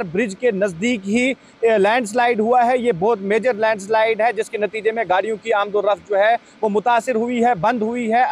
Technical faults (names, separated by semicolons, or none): none